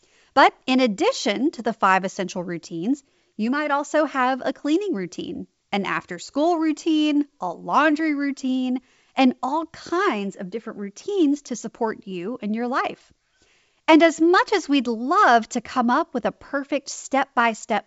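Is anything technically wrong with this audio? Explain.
No, nothing in this speech clip points to a technical problem. It carries the bandwidth of G.722 wideband telephone coding at 64 kbit/s, with nothing above about 7.7 kHz and at most a faint trace of the coding.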